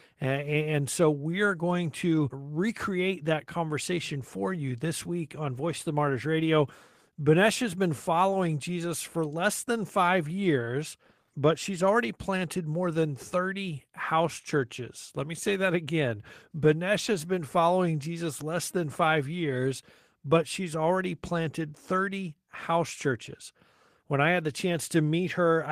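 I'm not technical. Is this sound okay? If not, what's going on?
Yes, nothing in this recording stood out as a problem when listening to it.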